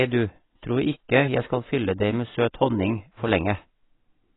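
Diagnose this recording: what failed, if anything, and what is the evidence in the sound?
The codec stage likely applied low-bitrate AAC compression, fitting roughly 16 kbps, throughout: heavy damage, nothing above 3.9 kHz, leaving the speech dull and smeared.

Word clock ticks came from the digital link's receiving converter running unlocked, off by around 100 ppm. It slips one sample every 0.2 s or so, giving about twenty sharp ticks from 0.28 s to 4.32 s.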